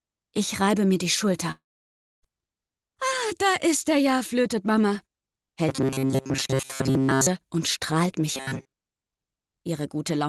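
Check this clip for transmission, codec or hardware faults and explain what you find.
Two kinds of fault are audible: one long network dropout and two stretches of robotic sound from repeated short buffers.

Long network dropout, 1.51 to 2.26 s. The sound trails off into a fading buzz, then silence. About 0.7 s of audio is missing, likely lost packets, and nothing is recovered.

Robotic sound from repeated short buffers, 5.69 to 7.27 s and 8.35 to 8.73 s. A rigid metallic buzz at 134 Hz replaces the normal texture. It is likely caused by replaying a roughly 7.5 ms chunk while most new audio is skipped.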